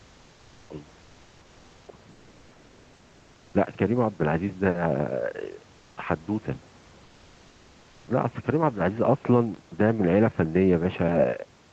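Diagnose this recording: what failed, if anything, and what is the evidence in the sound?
Between 1.86 and 2.21 s the speech sinks by roughly 40 dB at its deepest point, over a total of about four tenths of a second. This is speech suppressed in double talk, at the call-processing stage. The echo canceller most likely mistook the overlap with the far end for its own loudspeaker echo and attenuated everything. On a waveform the envelope collapses. A spectrogram shows the harmonics fading.

From 5.77 to 5.97 s, 200 ms of the pause lose their texture and become a smooth, even hiss about 2 dB quieter than the surrounding background, which sits about 34 dB under the loudest speech. This is comfort noise in place of the background, at the codec stage. The sender likely stopped transmitting during silence through discontinuous transmission, which points to Opus DTX, and the receiver synthesised a noise fill. 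On a spectrogram the irregular room-noise grain turns into a uniform smear capped at the 8 kHz band edge.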